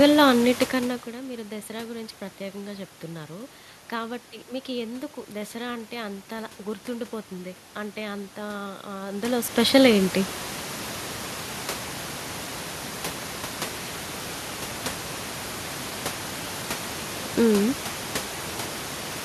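Nothing stood out on listening to this speech recording; the room background, about 14 dB below the speech, and the shifts in level as the talker moves near the start and again around 9 seconds belong to the recording itself.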